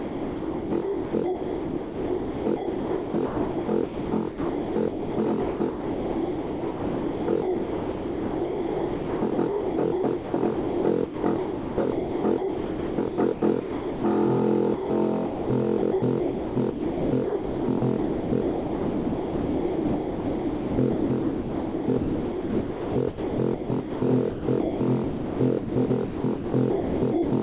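From 0 to 14.04 s the sound is chopped by the voice detector, likely: about 11 s of it is swapped for comfort noise, so the sound stutters against a synthetic hiss. On a spectrogram, detailed stretches alternate with flat, featureless noise bands, all stopping at 4 kHz, as the telephone-band call path does.

At 14.74–14.9 s and 15.26–15.5 s, short gaps of 160 ms and 240 ms are sound dropped by the voice detector, likely, and filled with comfort noise. The waveform shows uniform low-level blocks there.

Chopping returns at 15.78–24.02 s (about 6.6 s replaced) and 24.3 s to the end (about 1.9 s), likely from the same detector.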